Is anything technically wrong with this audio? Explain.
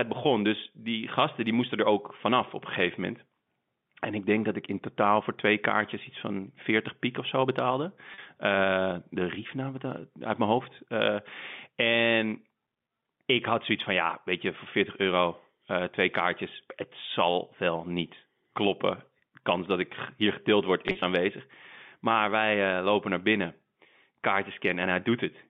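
Yes, there are two packet loss with pitch repetition events in this telephone-band speech (150 Hz to 3.6 kHz). At 8.14 to 8.18 s about 40 ms went missing, and around 20.88 to 21.02 s about 80 ms dropped out in scattered gaps over 140 ms. Each time, the receiver bridged the hole by repeating the last pitch period, so you hear a brief held, slightly buzzy sound.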